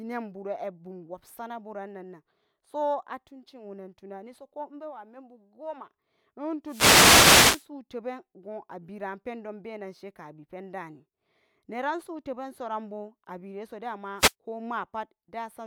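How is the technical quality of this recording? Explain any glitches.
The recording has two wireless microphone noise hits, at 6.65 to 7.68 s and 14.18 to 14.34 s. The FM radio link fades as reflections cancel, so receiver noise swells into static over the speech.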